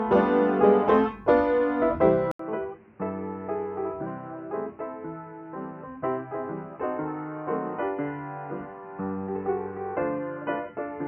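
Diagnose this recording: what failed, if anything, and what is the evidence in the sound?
At 2.31 s there's an 80 ms gap, then everything above 3 kHz vanishes through the end, the level falls by roughly 10 dB and a fresh noise floor sits around 30 dB down. That's likely the input switched to a poorer device at the driver level.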